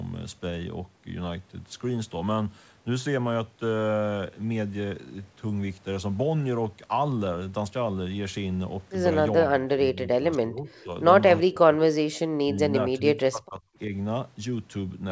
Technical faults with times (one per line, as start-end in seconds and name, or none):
9.44-10.91 speech suppressed in double talk
10.79-10.83 echo leak
11.39-11.84 speech suppressed in double talk
12.12-12.18 echo leak
12.44-12.60 speech suppressed in double talk
12.98-13.93 speech suppressed in double talk